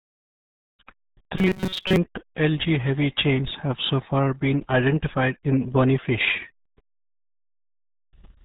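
Muffled, gargly speech runs through the whole recording, with nothing at all above about 4 kHz, so sibilants and consonant edges are lost and vowels carry a watery, churning texture. This is the RealAudio 14.4 codec heavily at work. Its crude low-rate speech model throws away the upper band and smears the spectral detail that remains, a sound that fits RealAudio 1 at around 8 kbit/s, built for dial-up modems.

From 1.38 to 1.97 s the speech turns into a rigid, metallic buzz pitched at 188 Hz, still loosely tracing the syllables but locked to one tone. This is robotic sound from repeated short buffers. The likely cause is new audio arriving too late, so playback loops a tiny slice of roughly 5.3 ms over and over while most of the real material in that stretch is skipped, and that loop length sets the fixed buzz pitch.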